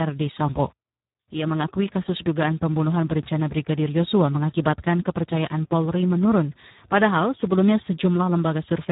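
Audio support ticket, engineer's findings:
Speex codec, heavy setting throughout. Too few excitation bits, likely around 8 kbps: speech hoarse, noisy, near-robotic. Band-limited, nothing above 3.8 kHz; dull, muffled top end.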